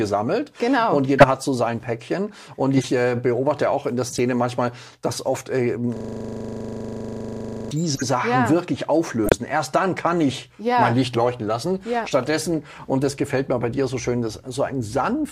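Short bursts of a corrupt frame decoded appear at 1.19–1.24, 2.76–2.84 and 4.10–4.19 s. Damaged compressed frames were played anyway, so misread gains throw energy to the wrong frequencies. Each is heard as a brief chirp or noisy blip and shows as a bright vertical smear on a spectrogram.

From 5.97 to 7.71 s a system hang loop repeats one 40 ms piece of audio about 43 times, which sounds like a 25 Hz buzzing stutter. The waveform shows an identical repeating block, and the spectrogram shows a rigid comb of repeated columns.

More corrupt frames follow at 7.94–8.03 s, at 9.23–9.32 s (where about 20 ms of extra time is added), and at 12.23–12.27 s, each again a short squeak with an out-of-place spectral splash.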